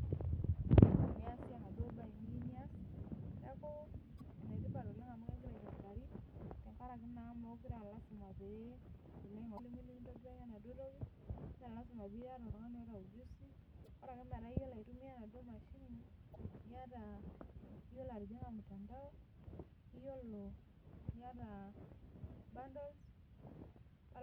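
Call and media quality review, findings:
Damaged data in a compressed stream: four short glitches cutting into the speech at 4.17–4.21 s, 9.55–9.59 s, 13.83–13.87 s and 16.34–16.36 s, each roughly 20–45 ms. Probable component is the decoder input, meaning the file or transport. Corrupted bytes make the decoder misread those frames and lose sync until it finds the next good frame header, which is what throws out the glitch.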